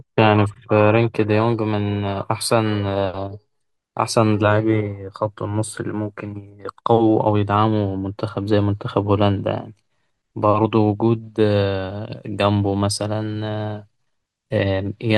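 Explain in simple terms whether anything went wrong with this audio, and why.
Nothing went wrong here that I could hear: listening closely to this speech recording, no fault stood out at any point.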